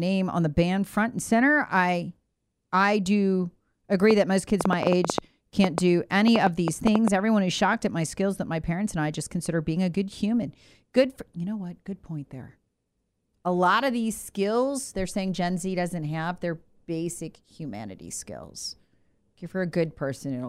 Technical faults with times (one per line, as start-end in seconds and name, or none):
4.11-7.09 train of clicks